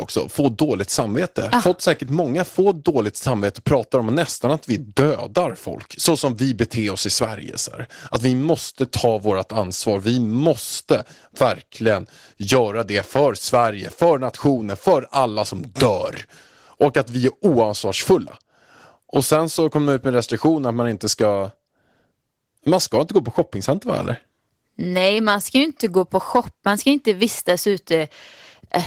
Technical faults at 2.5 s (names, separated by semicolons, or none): Opus voice compression